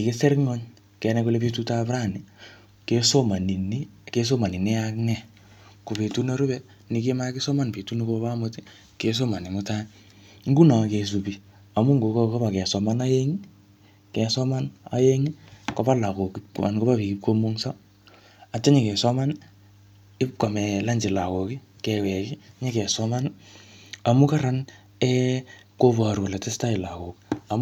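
No technical faults turn up anywhere in the speech. There is nothing here that needs a time marked or a fix described.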